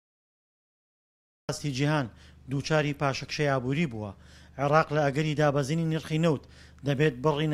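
The first 1.49 s are pure digital silence, and at 1.49 s the sound arrives already in progress with no attack or fade. This cut-off start means capture began mid-sound. Unlike a gap or dropout, nothing precedes the silence, so nothing was interrupted.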